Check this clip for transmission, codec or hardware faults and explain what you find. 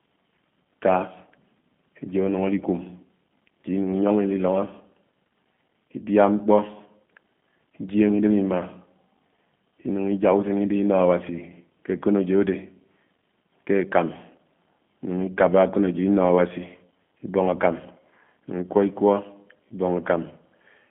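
One fault runs through the whole clip: G.729 codec damage, plainly audible throughout. The speech is rebuilt from a vocal tract filter, a pitch predictor and a few pulses per frame, which fits the 8 kbit/s G.729A codec. It sounds rough and slightly synthetic. A spectrogram shows energy confined to about 150 Hz to 3.5 kHz, with nothing above, and smeared, blocky harmonics.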